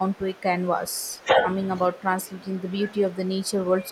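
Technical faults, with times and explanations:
0.07–1.52 s, speech suppressed in double talk: the speech dips by up to about 15 dB, losing level over roughly a second. This is likely an echo canceller pulling down the near talker while the far side was also talking.
1.89–3.91 s, speech suppressed in double talk: the speech again sinks, by up to about 10 dB, across roughly two seconds to the end. The canceller likely couldn't tell this voice from loudspeaker echo, so it attenuated both together.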